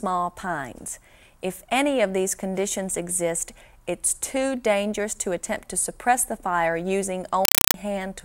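A Dolby Digital (AC-3) stream was passed through as ordinary samples, a compressed stream played as audio, so from 7.45 to 7.74 s the sound becomes chattering static: 4 ms noise bursts repeating at 31.25 Hz.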